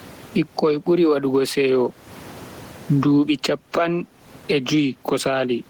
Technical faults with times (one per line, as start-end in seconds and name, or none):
0.00-5.70 gain pumping